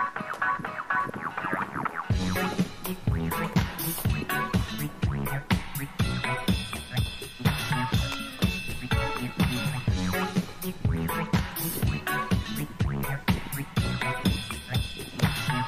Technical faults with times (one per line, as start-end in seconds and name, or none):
none